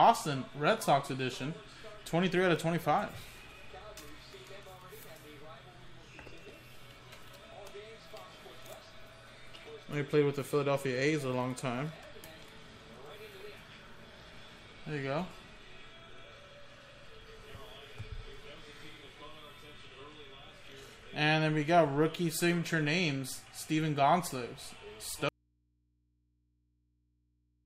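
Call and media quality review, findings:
Audio dropout to a faint residue from 25.29 s, continuing to the end. Signal cuts abruptly mid-flow, leaving only mains hum roughly 40 dB below the programme level. Likely a source disconnect upstream while the input stayed open. Waveform: sharp collapse to a thin, steady band. Spectrogram: broadband content vanishes at once, leaving narrow horizontal lines at the hum fundamental and harmonics.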